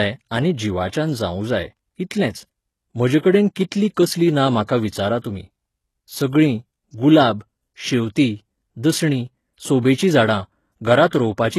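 Throughout the speech the treble sounds synthetic and gritty, with lispy s sounds and nothing above about 12.3 kHz, likely HE-AAC compression rebuilding highs at a low bitrate near 16 kbps.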